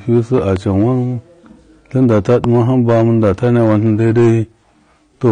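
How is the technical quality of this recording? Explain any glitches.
The technical quality is poor: the speech is clipped throughout, carries plainly audible codec damage, and has pops in two places.

Hard clipping runs through the whole clip. The signal was driven about 9 dB past what a stage could pass, so a few percent of samples were cut flat. That adds high harmonics, heard as crackle on louder syllables. On a waveform the peaks look squared off, and a spectrogram shows energy smeared upward at those moments.

The audio also sounds dull and smeared, with a warbling, fizzy texture and nothing above 9.7 kHz. The likely cause is AAC-LC coding at a low bitrate, consistent with about 32 kbps, which lowers the cut-off and quantises coarsely. A spectrogram shows a flat ceiling at 9.7 kHz and patchy holes below it.

Loud pops appear at two points. From 0.38 to 0.59 s there are two pops, peaking roughly 5 dB above the speech. 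From 2.44 to 2.47 s a single pop stands roughly 15 dB above it. Each is likely a voltage step or pulse added on top while the speech continues underneath. On a waveform they show as narrow spikes, and on a spectrogram as thin vertical broadband lines.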